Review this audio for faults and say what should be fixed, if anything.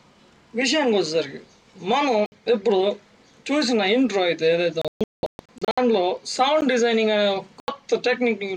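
The sound drops abruptly to dead silence three times: a 60 ms hole from 2.26 to 2.32 s, a brief tick at 6.61 s lasting about 12.5 ms, and an 80 ms hole from 7.60 to 7.68 s. These are blocks of digital silence: runs of samples set to zero, typically when the output buffer isn't filled in time, so the signal snaps to nothing and back with no fade. Giving the audio thread more buffer headroom and priority should stop these underruns.

From 4.82 to 5.78 s the sound breaks up into several short holes spread over about 960 ms, with roughly 640 ms of material missing in total. The longest silent stretch is 192 ms. This is a digital broadcast dropout: the receiver lost the signal or rejected corrupted frames and muted until clean frames arrived, so everything sent during those gaps is gone. The pattern points to about twenty lost frames of around 32 ms each. Better reception, with stronger error protection on the link, would prevent it.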